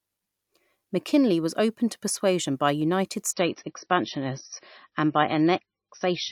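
At 3.33 s the speech abruptly loses its upper range: nothing above 6 kHz survives, sibilants turn dull, and compression artefacts become audible through to the end of the clip, with no gap at the switch. This is an adaptive stream at a lower bitrate. The player fell back to a leaner encoding when the connection slowed, and the sound fits a step from about 128 kbit/s MP3 down to roughly 24 kbit/s.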